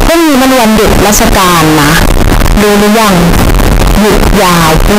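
From start to finish the speech is blasted into a harsh, near-square wave at an almost fixed, high level, with background noise as loud as the talker. It's likely float read as integer, with 32-bit float samples taken as 32-bit integers. Pitch stays followable.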